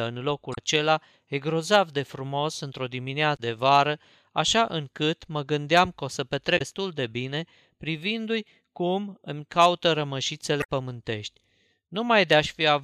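Damaged data in the compressed stream causes brief glitches at 0.51–0.58 s, 3.33–3.40 s (before "de vară așa încât"), 6.55–6.61 s (between "gândeam că o să" and "de bine") and 10.59–10.66 s. Corrupted frames there make the decoder lose sync until it finds a valid header.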